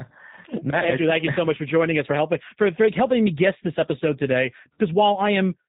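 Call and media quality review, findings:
G.729 codec, whole clip: speech band-limited, nothing above 4 kHz, slightly rough and synthetic texture, plainly audible. Sound fits 8 kbit/s G.729A, which rebuilds speech from a vocal tract filter, pitch predictor and sparse pulses per 10 ms frame.

VoIP packet loss concealed by the speech codec, 4.73–4.79 s, right after "guess this episode today": about 40 ms of lost audio, consistent with two dropped packets. Decoder extrapolated from its last pitch and filter state, stretching the last sound with falling gain before normal frames resume.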